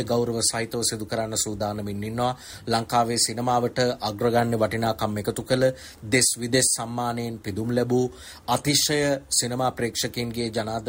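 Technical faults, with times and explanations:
No technical faults can be heard anywhere in this audio. Nothing in it calls for a time mark or an explanation.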